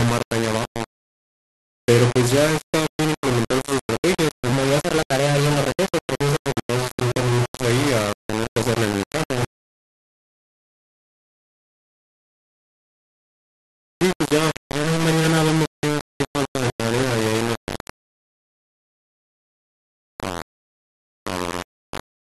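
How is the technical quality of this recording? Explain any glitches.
The technical quality is poor. Two faults stand out.

Throughout, the speech sounds harsh and grainy, with distortion nearly as loud as the voice. This is likely low bit depth without dither: about 3 bits, rounded.

From 4.53 to 6.56 s, the speech turns hurried and high, up about three semitones. This is likely a section at the wrong speed, played 1.17 times too fast.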